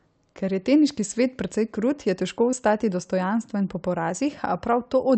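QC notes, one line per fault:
2.51–2.55 s, short concealed packet loss: about 20 ms of audio arrived too late, so the decoder extended the preceding sound and blended back, leaving a brief smear.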